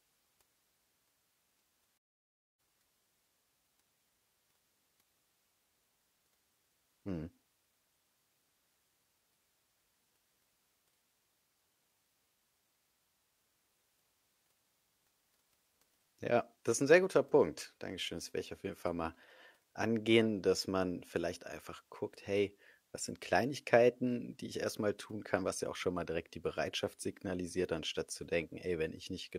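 A digital broadcast dropout runs from 1.96 s to 2.60 s in this speech recording. The receiver stopped getting decodable frames, either because the signal was lost or because frames failed their error check, so it muted its output until valid data returned. The sound fades to silence over about 20 ms, stays silent for roughly 0.6 s, and then resumes. Whatever was transmitted during that gap is gone, which fits a short run of about fourteen discarded frames.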